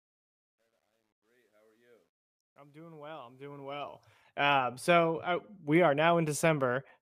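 From the start to 4.21 s, the fade-in on this speech carries truncation distortion. The gain stage appears to round the signal to a coarse grid, consistent with roughly 11 bits, with no dither. Until about 2.81 s the quiet waveform collapses into square steps, heard as gritty distortion. A waveform view shows stair-stepped blocks, and a spectrogram shows broadband hash that clears as the fade reaches full level at 4.21 s.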